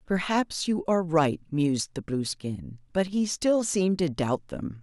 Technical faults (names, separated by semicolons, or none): one channel drops out